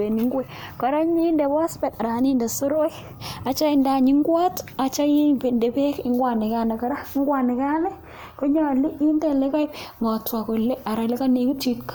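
No technical faults are audible anywhere in the speech recording.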